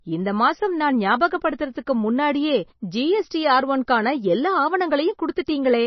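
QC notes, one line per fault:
Throughout, MP3 compression: nothing above 5.9 kHz, and weak detail flickers in and out, heavily watery and swirly, likely a starved encoder, fitting about 25 kbps.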